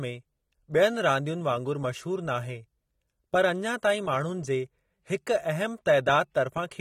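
AAC compression, likely, runs throughout the speech, from start to finish. Nothing is present above 16.8 kHz, and the damage is plainly audible: sibilants turn fizzy and sustained sounds take on a warble, with a dull, smeared top end. The encoder, which this points to being AAC-LC at a low rate around 32 kbps, has too few bits for every frequency band, so it drops or crudely fills detail the hearing model judges least noticeable.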